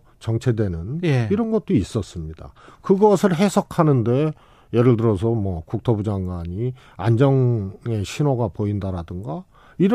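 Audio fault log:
No faults found in this speech recording.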